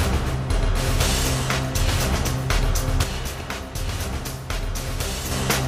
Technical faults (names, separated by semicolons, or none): one channel drops out